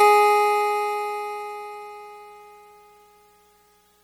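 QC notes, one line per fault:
Throughout, MP3 compression: the music has a dull, capped top end and a watery, swirling texture, with attacks smeared, likely from an MP3 encoder starved of bits, which fits a low rate near 48 kbps, cutting treble and toggling weak spectral lines between frames.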